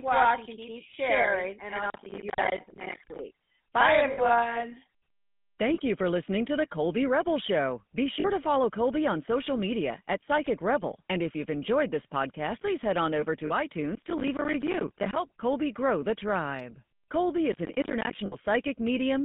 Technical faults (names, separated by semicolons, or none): GSM full-rate codec; lost GSM frames; processor overload crackle